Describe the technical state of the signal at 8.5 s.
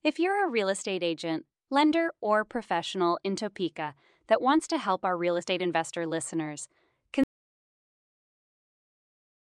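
At 8.5 s the signal is in an audio dropout to silence that begins at 7.24 s, right after "real estate investor listeners", and runs to the end of the clip. The speech stops abruptly mid-flow and gives way to silence, with no room tone or noise floor underneath. The likely cause is a lost input, such as a disconnected device, a failed link or an accidental mute, while the recorder kept writing silence.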